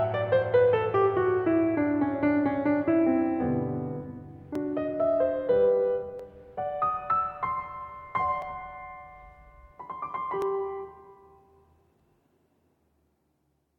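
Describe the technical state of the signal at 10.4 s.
Dropped samples at 10.42 s: a single sharp click cuts across the music, a thin vertical line through the spectrum. It is likely caused by well under a millisecond of audio going missing, so the waveform jumps abruptly between two non-adjacent values.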